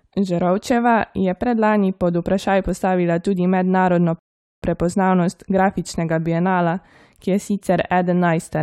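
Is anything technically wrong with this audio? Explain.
Yes. A rebuffering stall runs from 4.19 to 4.63 s, between "vprašaj postavila tudi mednarodno" and "prepoznavnost grafičnega bienala ki". The player used up its downloaded audio and had to wait for more data before continuing. The speech cuts abruptly to silence, then picks up exactly where it stopped, with nothing skipped or repeated. The stall adds about 432 ms of dead air that doesn't belong to the speech.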